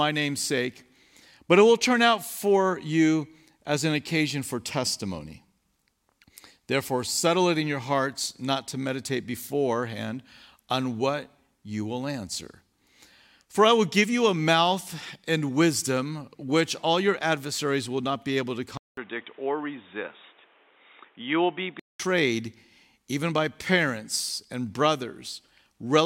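The system likely switched its input to a poorer device at 18.77 s, just after "not be able to", leaving a 0.2 s silence. Until 22.0 s the speech loses everything above 3.8 kHz, sounding dull and boxy over faint new background noise, with loudness unchanged.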